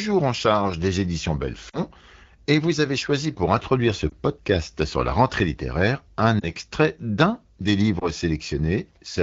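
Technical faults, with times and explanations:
1.69–1.80 s, 4.10–4.12 s, 6.39–6.44 s, 7.99–8.09 s, lost AMR speech frames: brief warbling dips as the decoder repeats the last good pitch and vocal tract settings with falling gain. The first gap is about 40 ms, the others 20 ms. Spectrogram shows smeared, fading harmonics, waveform a shrinking envelope.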